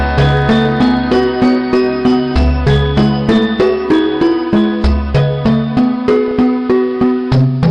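From 6.28 to 6.31 s there is a brief patch of DAB burbling. Under weak reception, bit errors (here at a rate of around 0.2 percent) slipped past error correction into the MP2 audio data, corrupting samples in individual sub-bands. It comes through as a quick burble of noise blips lasting roughly a handful of frames. On a spectrogram it shows as short, isolated bright blocks confined to narrow frequency bands.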